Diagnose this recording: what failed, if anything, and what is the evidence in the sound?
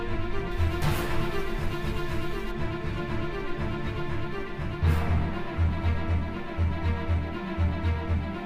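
Pre-emphasis left on from 0.51 to 2.51 s: treble jumps about 10 dB at 10 kHz, bright and sibilant, fitting a 50 µs FM curve whose de-emphasis never ran.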